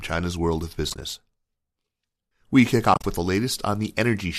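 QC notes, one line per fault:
0.90–1.02 s and 2.94–3.04 s, AAC frame loss with muting: the sound drops into short, soft-edged holes. About 50 ms goes missing across 120 ms in the first, and about 80 ms across 100 ms in the second, with the longest gap around 40 ms. The decoder zeroes the lost frames' spectrum, and the overlapping windows fade the edges. The gaps fit about 10 ms frames, likely from low-delay AAC at 64 kbps.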